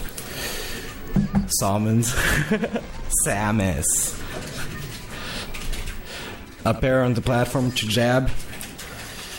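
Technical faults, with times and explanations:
No technical faults can be heard: the signal holds steady, with no interruptions, level disturbances or added noise at any point.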